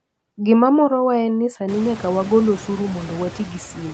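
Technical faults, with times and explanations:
Throughout, noise suppressor artifacts: the background is pulled down by about 16 dB band by band, leaving a residue that worsens after the room noise jumps near 1.5 s. The waveform's floor pumps.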